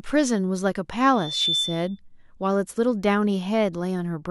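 Speech carries a loudspeaker feedback squeal from 1.15 to 2.0 s: a single tone at 3.5 kHz swells out of the sound over about a third of a second until it is roughly as loud as the talker, then stops. The microphone is hearing its own loudspeaker, and at that frequency the loop gain tops one. The swelling onset distinguishes it from a steady interference whine, which would sit at a constant level from the start.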